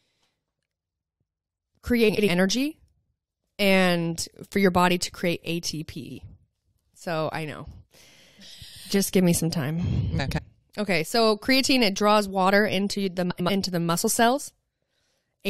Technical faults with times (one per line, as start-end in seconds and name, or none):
2.08-2.28 frames out of order
6.03-6.18 frames out of order
10.19-10.39 frames out of order
13.30-13.50 frames out of order